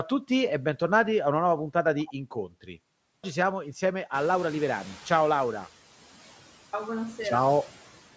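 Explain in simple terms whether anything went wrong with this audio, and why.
Two things went wrong, and both come from the playback and call processing, not the recording itself.

The first is a clipped start after a pause. It happens twice. At 3.09 s, speech resumes after a short pause of about a third of a second, and its first 0.15 s is missing. At 6.6 s, after a pause of almost a second, the first 0.13 s is lost. The sound device seems to doze off in silence. It needs a moment to wake, so the opening of each phrase is swallowed and the speech jumps in abruptly.

The second is a noise suppressor catching up. Around 4 s the background noise in the room suddenly gets louder. The suppressor had been tuned to the quieter room, so from 4.14 s the new noise comes through with less reduction. Over about one and a half seconds it adjusts, and by 5.68 s the noise has sunk lower. You hear a swell of background noise that then settles lower.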